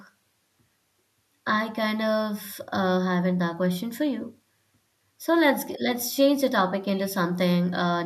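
Nothing goes wrong technically anywhere in this stretch of speech, so there's no fault to point to at any moment.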